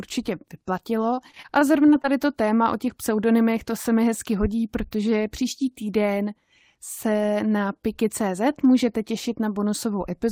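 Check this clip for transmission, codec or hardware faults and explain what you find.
One transmission fault is present. From 1.15 to 2.30 s, just before "téma o těch pseudonymech", there is repeated packet loss with a robotic sound. Audio packets went missing again and again. Each hole, none longer than about 20 ms, was patched by stretching the preceding sound. Roughly an eighth of the stretch is this filled-in material. The speech turns choppy and robotic, with small pieces dropped out.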